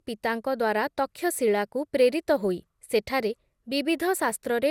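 Throughout the speech, the sound is swirly, smeared and hollow, with blurred attacks and nothing above 17.3 kHz. This is likely generation loss from about ten MP2 encodes, consistent with 128 kbit/s.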